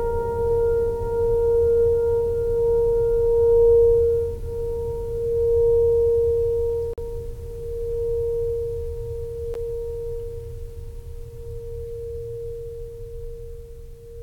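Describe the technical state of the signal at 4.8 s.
At 4.8 s the music plays through intact, with no dropout, click, distortion or other fault in the signal at that moment.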